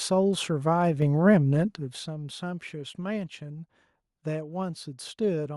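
At 1.02 s the speech and the room noise behind it jump up together by about 4 dB in a single step. That's the microphone volume stepped up: the call software decided the input was too quiet and bumped the device gain all at once instead of easing it in.

From 1.61 to 2.15 s there's zipper noise, a fine ticking that rides on the speech as the level drops by something like 15 dB. The gain is being moved in coarse steps, around a hundred a second, with no smoothing, and each step leaves a tiny click.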